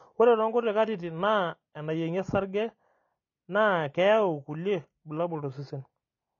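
AAC compression runs throughout: the speech stops at 8.4 kHz and sounds dull, smeared and fizzy, likely from low-bitrate AAC-LC near 24 kbps.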